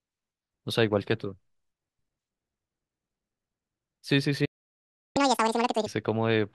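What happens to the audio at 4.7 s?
A playback stall: from 4.45 to 5.17 s the speech halts into about 0.7 s of silence, likely because the player ran dry of data. The gap is far longer than a brief dropout.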